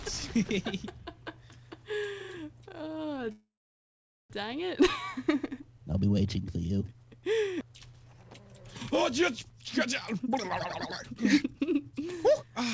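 From 3.32 to 4.33 s the sound stalls: the last moment is stretched into a fading buzz that sinks to near silence for about 0.8 s. The audio then resumes exactly where it stopped, with nothing skipped, which marks it as a call audio freeze (likely a jitter buffer that ran dry while packets were delayed), not a dropout that loses material. Later comes jitter buffer speed-up: 9.53 to 9.65 s runs at 151% speed, 10.12 to 10.31 s at 133%, and 11.04 to 12.55 s at 120%. Short pitch-period slices are cut out, roughly a few tens of milliseconds in each of the first two and about a third of a second in the last. The pitch stays the same, so it sounds hurried rather than raised like a resampled playback. Throughout, the G.722 call path at 64 kbps leaves nothing above 8 kHz.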